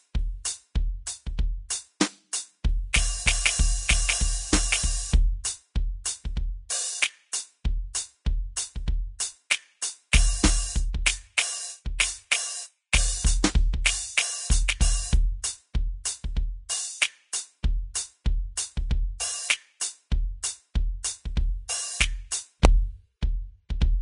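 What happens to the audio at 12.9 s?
An integer overflow occurs at 12.94 s. For a few milliseconds the music's peak pushes about 1 dB past the largest value the integer path can hold. Instead of being limited at that ceiling, the sample values wrap around to the opposite sign, so the waveform jumps across its full range. This is heard as a single sharp crack on that peak, more abrupt than ordinary clipping would sound, because the signal flips instead of flattening.

Underneath that moment, as throughout the clip, the music carries plainly audible grainy, hissy coding damage, with nothing above about 10.6 kHz. This is likely Vorbis compression at a low rate, one that fits roughly 32 kbps. At that rate the encoder lowers its cut-off and quantises the remaining treble so coarsely that fine detail turns into noise of similar energy, which roughens tones and blurs attacks.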